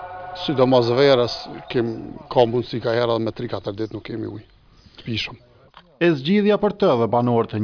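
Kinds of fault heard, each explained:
No kinds of fault are heard in this clip.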